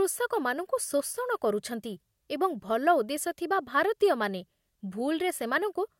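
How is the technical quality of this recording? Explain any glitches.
The technical quality of this recording is sound, with no glitches to explain.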